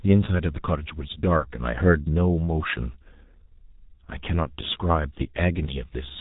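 From start to finish the speech carries heavy G.723.1 codec damage. Nothing reaches above 3.8 kHz, so the sound is muffled. The low bitrate points to about 6 kbit/s. Coarse 30 ms frames and a slow voice model leave it hoarse, with smeared consonants.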